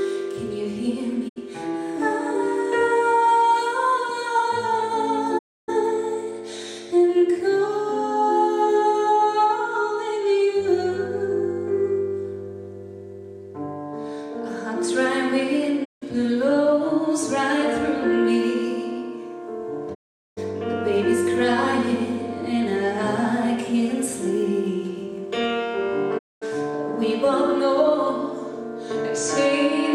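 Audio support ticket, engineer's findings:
Sound cuts to silence via a quick fade of about 20 ms, then resumes later in the programme. Five holes: 1.28–1.38 s, 5.37–5.70 s, 15.84–16.04 s, 19.93–20.39 s, 26.17–26.44 s, ranging from 64 to 416 ms. Digital broadcast dropout at the receiver. Lost signal or failed checksums trigger a mute until clean frames return. Hole lengths are multiples of 32 ms, fitting whole-frame losses. Content during the gaps is unrecoverable.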